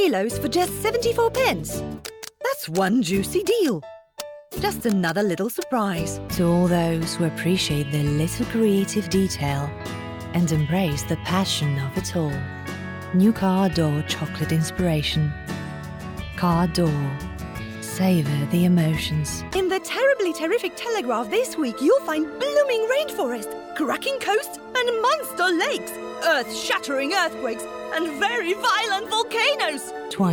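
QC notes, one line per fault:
No faults were found on this pass.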